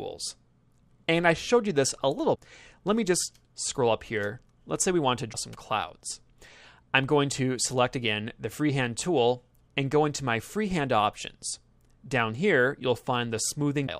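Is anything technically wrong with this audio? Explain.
Yes. Three very short glitches occur, at 2.34 to 2.37 s, 5.32 to 5.35 s and 13.86 to 13.89 s. Each lasts about one 26.1 ms frame. The audio skips forward briefly at each point. The likely cause is a broken MP3 bit reservoir. Each frame draws some of its data from space in earlier frames. When frames go missing, the next frame reads bytes that belong elsewhere. That one frame decodes wrongly, so the sound stumbles for an instant.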